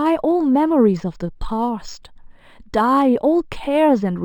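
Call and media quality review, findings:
Imaging from linear upsampling, whole clip. Top end sounds dulled, with a faint metallic shimmer riding on the sibilants. Probable component: the resampler taking 12 kHz audio up to 48 kHz with straight-line interpolation. That's a weak anti-imaging filter, so mirrored copies of the speech band land around 6 to 12 kHz, roughly 35 dB down.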